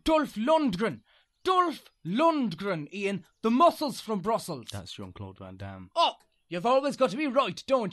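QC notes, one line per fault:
No fault found, so there is no fault line to give for this speech clip.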